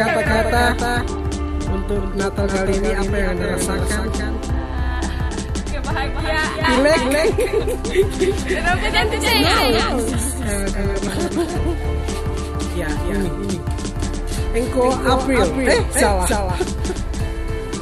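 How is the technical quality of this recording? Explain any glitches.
The recording has one persistent glitch. A doubled audio track runs throughout: the sound was likely captured twice through paths of different speed, so a clean copy about 5 dB quieter trails about a third of a second behind, giving a dry, abrupt echo.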